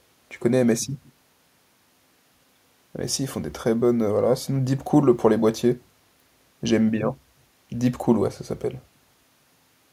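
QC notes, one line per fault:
No faults found in this clip.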